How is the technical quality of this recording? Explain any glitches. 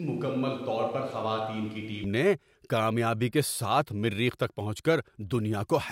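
One glitch opens the clip. Until 2.04 s the speech sounds hollow, roomy and thin in the bass, about 5 dB quieter, then snaps back before "نے کامیابی کے". A switch to a distant microphone is the likely cause.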